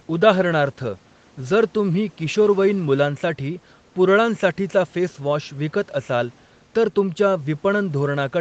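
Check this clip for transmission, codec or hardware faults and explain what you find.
No faults turn up in this speech: the content stops at 8 kHz, as expected after call microphone processing and an Opus WebRTC call path whose coding character fits a rate of about 20 kbps.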